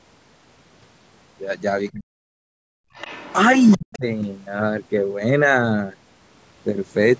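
From 1.92 to 2.4 s the speech sinks sharply, by something like 40 dB at its deepest, while a second voice is active. This is speech suppressed in double talk, likely caused by the echo canceller failing to separate the near talker from loudspeaker echo and pulling the whole microphone signal down. On a waveform the envelope collapses to a thin sliver. On a spectrogram the harmonics fade out across the band.

From 2.68 to 2.94 s the room tone itself drops away, by about 32 dB at its lowest, and then returns. This is background gated by the echo canceller: during loudspeaker playback it clamped the microphone hard and then released it. On a waveform the noise floor shows a flat, near-silent notch. On a spectrogram there is a vertical gap in the low-level broadband haze.

At 2.94 to 3.34 s, and again at 3.59 to 3.97 s, a second, fainter voice comes through. It is the other side's voice leaking through, likely loudspeaker sound the canceller failed to remove. 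The first stretch sits roughly 20 dB under the main speech and the second around 15 dB under, so the later one is easier to hear. On a spectrogram they appear as weak harmonic traces with their own pitch contour, separate from the main talker.

From 3.76 to 4.06 s, overlapping the second leak, the speech is suppressed in double talk again. It falls by roughly 40 dB, and the spectrogram shows the same fading of the harmonics as before. The spectrum stops at 8 kHz throughout, which is expected from the call microphone processing.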